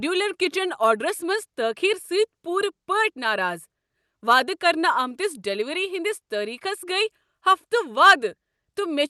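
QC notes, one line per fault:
No faults are heard in this speech clip. It has passed through a WebRTC call path, and the top end stops at about 12 kHz, which fits an Opus call codec working normally.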